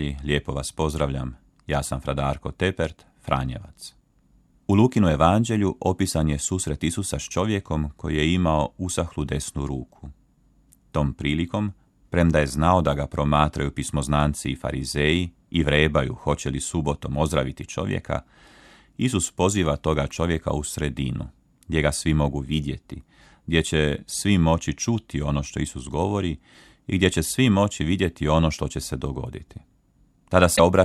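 Right at the end of the speech, around 30.53 to 30.60 s, there's a short burst of damaged data in the compressed stream. The decoder hits corrupted frames, loses sync and hunts for the next header, so you get a quick glitch lasting about 70 ms.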